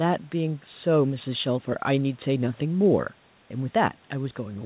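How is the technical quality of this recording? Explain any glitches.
No glitches to report; the speech is narrowband, with nothing above 4 kHz, which fits a G.711 A-law call path, and that band limit is normal for such a call rather than a fault.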